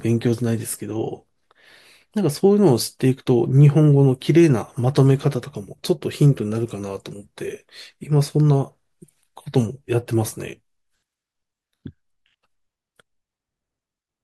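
No technical faults can be heard anywhere in the recording.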